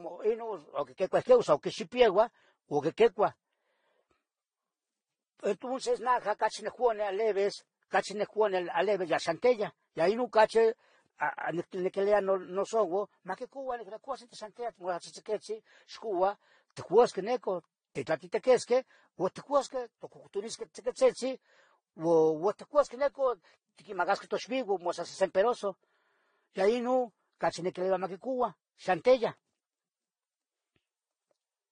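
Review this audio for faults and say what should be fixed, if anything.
The speech was likely passed through several lossy encoders in a row, with a chain pointing to low-bitrate Vorbis, then AAC-LC, then Vorbis again. This is transcoding between lossy codecs. Each later encoder spent its small bit budget re-encoding the earlier encoders' artefacts while adding its own, and the lowest bandwidth limit in the chain survived. Throughout the clip nothing is left above 9.8 kHz, and artefacts from different codecs are heard layered together.

Prevent it by encoding once, from the original uncompressed source, to the final format.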